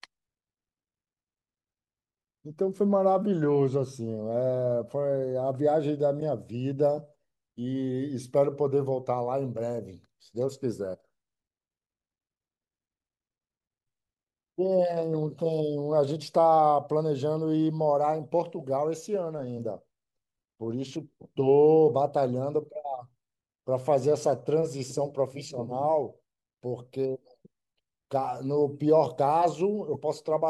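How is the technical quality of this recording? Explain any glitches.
The recording has two short decoding glitches, both corrupt frames decoded. At 6.20 to 6.22 s, about two frames play damaged, giving a glitch near -25 dBFS. At 29.93 to 29.99 s, a few frames produce a quieter glitch, near -30 dBFS. Flipped bits in each compressed frame make the decoder misplace energy in frequency. Each glitch lasts about as long as the damaged frames.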